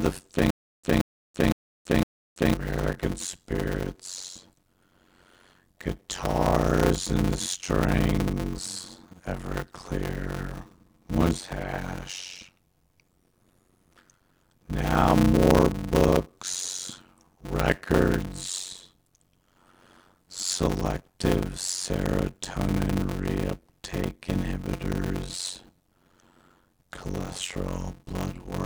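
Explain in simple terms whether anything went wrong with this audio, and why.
Two things went wrong. Throughout the recording there is a block size mismatch (padded). One stage passed along short chunks, which points to about 256 samples each, and the next stage read longer ones, so every chunk was topped up with silence. The result is a steady buzz near 92 Hz, and the speech drags along at about half speed while the voice keeps its character.

From 0.51 to 2.54 s there is a stutter with silent gaps, likely from a player or stream that stalled and kept retrying. A 0.18 s fragment of speech plays, then 0.33 s of dead silence follows. This repeats four times, every 0.51 s, and the speech that should have filled that time is lost.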